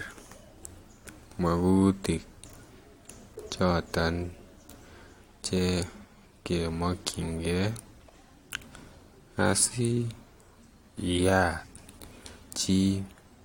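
Speech recording with no audible technical faults anywhere.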